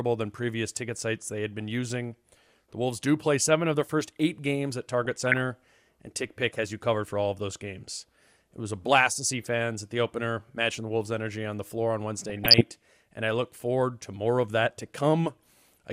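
Short blips of noise burble through the speech from 5.05 to 5.37 s and again, rougher, from 12.29 to 12.62 s. This is DAB burbling. Weak reception let bit errors slip past error correction, corrupting samples and scale factors so single sub-bands jump in level frame by frame. The second burst points to a heavier error rate.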